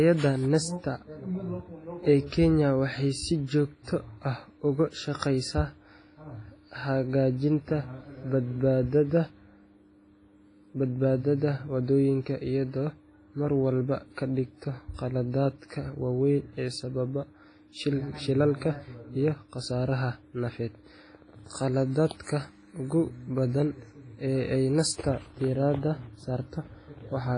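Speech, and it's carrying heavy codec damage from start to finish, most likely WMA compression at a low bitrate, around 24 kbps by the sound. Nothing survives above 10.4 kHz, and the long transform blocks smear quantisation noise into a ringing, washy haze that breathes with the voice.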